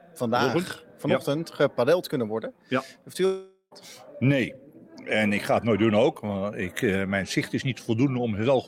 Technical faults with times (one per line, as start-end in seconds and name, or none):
3.25-3.73 long network dropout